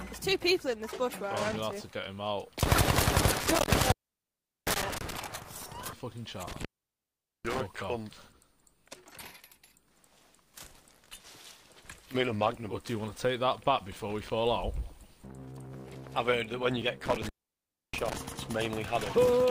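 Three times the sound drops out abruptly, with crackle at each edge and only faint hiss left in the gap: from 3.40 to 5.17 s (silent for about 750 ms), 6.48 to 7.60 s (about 800 ms) and 17.06 to 18.17 s (about 650 ms). This is intermittent contact. A loose cable or plug is briefly losing its connection, so the signal path opens and the sound stops. The scraping contacts make the crackle as the connection breaks and re-makes.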